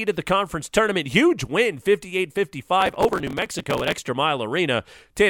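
From 2.81 s to 4.08 s the speech is overrun by processor overload crackle: the processor can't finish its very short audio buffers, around a millisecond and a half each, on time, and roughly a hundred deadlines slip in succession. Each missed buffer is simply skipped, leaving a tiny hard-edged gap, so the result is a dense gritty tearing over the voice rather than the single clean dropout of one lost packet. It stops once the load clears.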